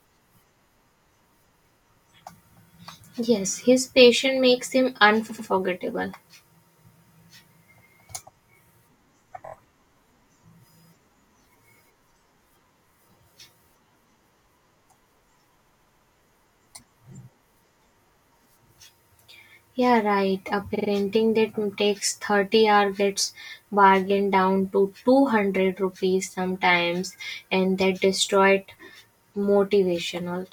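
A speech recording with repeated frames in four places. Just after "his passion makes him", a 92.9 ms block plays twice more (5.28–5.47 s). Then a 23.2 ms block repeats three extra times at 9.45–9.52 s, a 139.3 ms block three times at 15.67–16.09 s, and a 46.4 ms block three times at 20.74–20.88 s. Each stutter lengthens the audio, by up to 418 ms, rather than leaving a gap as a dropout would, and the block lengths fit whole compressed frames being resent.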